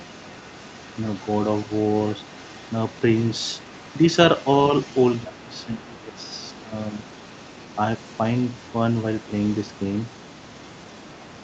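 From 0 to 4.01 s, again at 4.37 to 4.53 s, and from 4.71 s to the end, the other side's voice leaks through. It sits faint, far below the talker. This is likely a loudspeaker echo that the echo canceller left behind in the microphone signal.

From 5.24 to 6.31 s, and again at 6.51 to 6.74 s, the talker's speech is suppressed in double talk. The voice dips sharply, by up to about 20 dB. Both sides were likely talking at once, and the canceller turned everything down.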